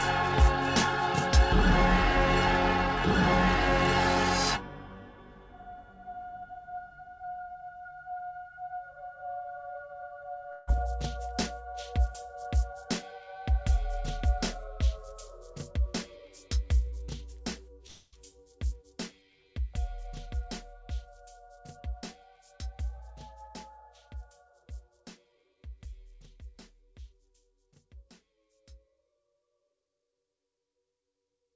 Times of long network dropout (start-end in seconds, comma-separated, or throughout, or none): 10.52-10.70, 17.87-18.15